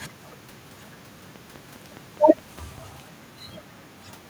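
A speech clip with a train of clicks from 1.36 to 2.79 s: about seven similar, regularly spaced pops at 4.9 per second, standing well above the speech. Likely interference or a faulty connection or power supply.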